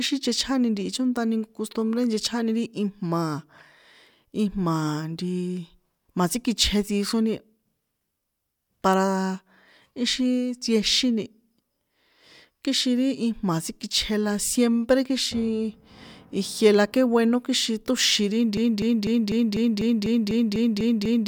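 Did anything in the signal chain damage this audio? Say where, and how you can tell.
Yes: a broken-record loop runs from 18.57 s to the end of the speech clip. A fragment 248 ms long repeats identically, back to back, eleven times, with no new material after 18.57 s. The exact, evenly spaced repetition is the tell. A stalled player, encoder or stream buffer, likely at the playback or streaming stage, kept resending the last chunk it held, so the speech that should have filled those final seconds is lost.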